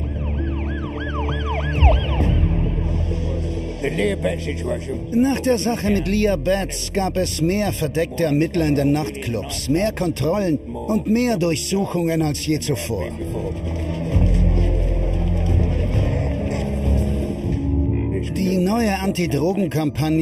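From start to finish the clip carries channel delay (comb filtering). One channel trails the other by a fraction of a millisecond, around 0.4 ms, and when the two are folded to mono the shared content cancels at regularly spaced frequencies. The first notch sits near 1.5 kHz, with further notches stepping upward at even intervals. Because the offset never changes, the notches stay fixed, giving the sound a constant hollow, phasey coloration.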